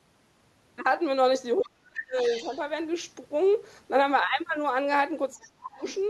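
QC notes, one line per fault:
1.59–2.17 s and 5.34–5.83 s, speech suppressed in double talk: the talker's speech is pushed down hard, by roughly 35 dB at its deepest in the first stretch and roughly 25 dB in the second, with about half a second affected each time. The likely cause is an echo canceller that, with both sides speaking at once, could not tell the local talker from loudspeaker echo and attenuated everything.
1.95–1.99 s, 2.18–2.58 s, 5.42–5.48 s and 5.86–5.94 s, other side's voice leaking through: a second, fainter voice surfaces in short scraps, the longest at 2.18–2.58 s. It sits roughly 10 dB below the talker in the first scrap, roughly 20 dB below at 2.18 s and 5.86 s, and roughly 30 dB below at 5.42 s. This is likely loudspeaker playback reaching the microphone that the echo canceller failed to remove, clustered around the suppression stretches.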